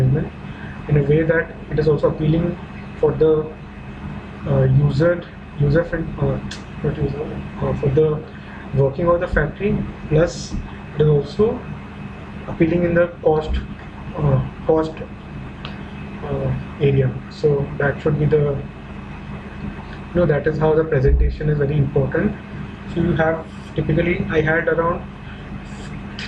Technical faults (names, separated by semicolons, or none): MP2 compression